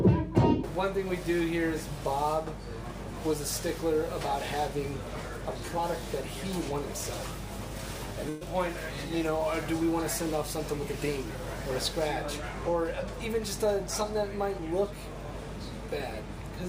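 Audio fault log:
Throughout: mains hum, a steady 50 Hz tone with low harmonics, fairly loud at roughly 10 dB below the signal. It shows as thin horizontal lines at 50 Hz and its multiples on a spectrogram.
8.29 to 8.43 s: burst of packet loss. Around 120 ms went missing, and the receiver filled it by holding the last sound and letting it fade out, so the sound skips ahead afterwards. On a spectrogram this looks like a smeared, static band. On the waveform the envelope decays and then jumps.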